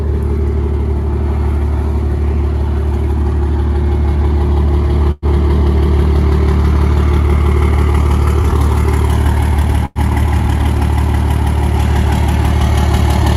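At 5.11 to 5.25 s and again at 9.85 to 9.99 s, the sound stalls into a short fading buzz of about 100 ms, the second tailing into brief silence, then resumes intact but later. This call audio freeze likely comes from delayed packets draining the jitter buffer.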